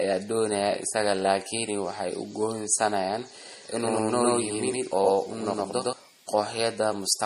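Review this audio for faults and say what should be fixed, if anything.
Throughout, the speech sounds watery and smeared, with nothing above 14.7 kHz. This is likely MP3 compression at a low bitrate near 40 kbps. Use a higher bitrate.

From 3.45 to 5.93 s, a doubled audio track appears. An equally loud copy trails by about a tenth of a second and starts and stops abruptly. This likely comes from a second, slower capture path. Route the audio through one path only.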